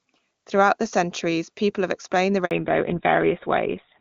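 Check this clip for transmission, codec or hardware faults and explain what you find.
Two faults show up, both around the same moment in the speech. At 2.45 s there's a handover gap lasting 60 ms, to 2.51 s: the call switches networks, no speech frames arrive, so the sound drops out abruptly and that slice is lost. From 2.51 s to the end there's a fallback to narrowband: the link drops from wideband AMR-WB to what sounds like GSM full rate, so nothing above 4 kHz survives and the voice turns duller and rougher. Before the switch the HD Voice path sounds clean, with little or no codec damage, which fits its top rate of 23.85 kbit/s.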